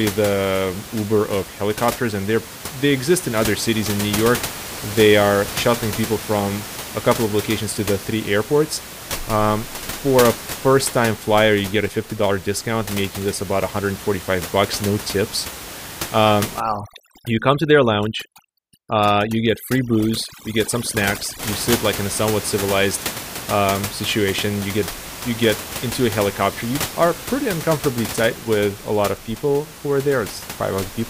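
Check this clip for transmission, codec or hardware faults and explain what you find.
One processing fault stands out, with room noise about 11 dB below the speech. Overdone noise removal runs from 16.60 to 21.39 s, ending before "you sit like in". An over-strong suppressor mutes bands near its noise estimate. Quiet speech vanishes, leaving twinkly near-silence.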